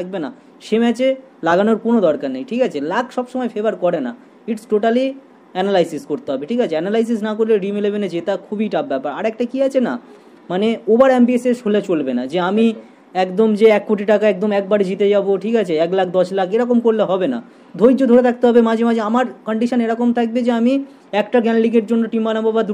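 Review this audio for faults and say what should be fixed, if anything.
No faults; nothing needs fixing.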